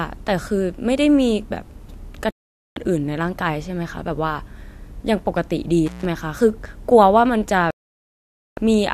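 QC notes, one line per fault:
2.31 to 2.77 s and 7.71 to 8.58 s, digital broadcast dropout: the speech goes dead for about 0.46 s, then about 0.86 s later on. Bad or missing frames make the receiver mute until clean ones come back, so the audio carried in those gaps is simply gone. The lengths fit runs of roughly 24 ms frames being thrown out.
5.86 to 6.05 s, intermittent contact: a short break of about 155 ms with crackle at both edges as a loose plug or cable opens and then closes again. While the line is open, the speech is replaced by a faint hiss rather than true silence. That residual hiss is what sets this apart from the dropouts, which are clean mutes.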